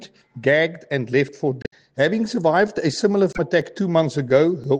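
Starting around 0.26 s and running to about 4.64 s, there's a steady tick roughly every 1.02 s. These are periodic USB or driver dropouts. Something in the background stalls the bus or the audio driver on a fixed schedule, and each time about a millisecond of audio just gets skipped, not padded with silence. That's why you hear a small click or pop at each gap, a handful of them all evenly spaced.

At 1.62 to 1.73 s and again at 3.30 to 3.39 s there's a short glitch, each one about a tenth of a second long. That's damaged data in a compressed stream. A chunk of the encoded data is corrupt, so the decoder can't read those frames properly and loses its place. It glitches for a moment while it hunts for the next good frame header.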